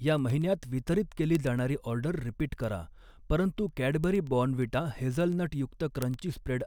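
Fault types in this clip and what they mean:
Word clock ticks: an unlocked digital link slipping one sample at a time, giving sharp ticks roughly ten a second through the speech, which suggests clocks a couple of hundred ppm apart.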